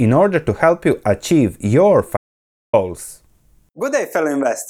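Right after "help you achieve your", at 2.17 s, the speech cuts to dead silence, with no room tone, until 2.73 s, and about 565 ms is gone. This audio dropout to silence was likely the input being briefly lost while the recorder kept writing silence.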